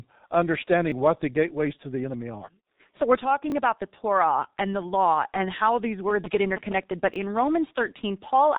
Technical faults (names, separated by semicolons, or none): G.723.1 codec; repeated buffer; GSM signalling bursts